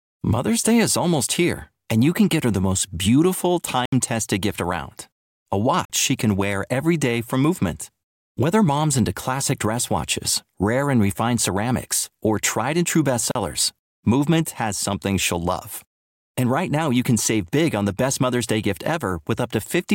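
Three abrupt holes cut through the speech: at 3.85 s, after "her the most beautiful", lasting about 70 ms; at 5.85 s, just before "she can wear every", about 46 ms; and at 13.31 s, after "or tried and true", about 38 ms. Each is a block of digital silence, where samples were replaced by zeros with no fade. The 46 ms gap fits a 2048-sample buffer left unfilled in time.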